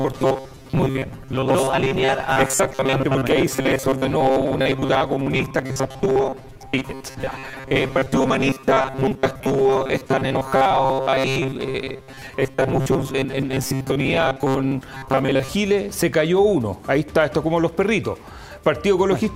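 Robotic sound from repeated short buffers, 0.01 to 15.49 s: a rigid metallic 133 Hz buzz, likely from about half the audio repeating stretches of roughly 7.5 ms.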